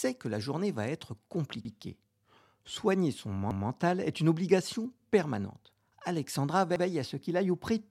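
Repeated frames make the speech stutter at 1.65, 3.51 and 6.76 s. Each time a compressed block plays twice. The block is 93 ms at the first and last points and 186 ms at 3.51 s. Unlike a dropout, nothing goes missing: the same sound comes back, and the audio runs longer.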